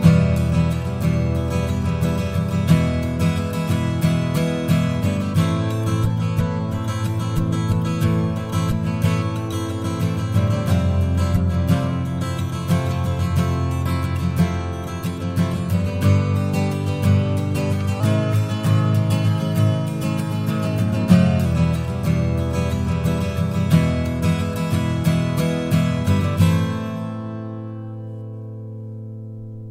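From 18.00 to 21.46 s the audio shows a wrong sample rate fault: it runs 1.09 times too fast and sits 1.47 semitones sharp, with speed and pitch shifted together. That ratio fits 44.1 kHz material played at 48 kHz without conversion.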